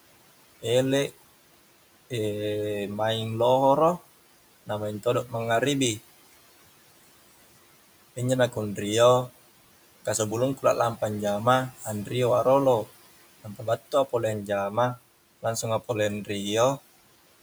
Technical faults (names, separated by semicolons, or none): speech cut by the noise suppressor